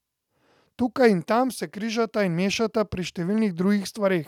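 No technical faults are audible.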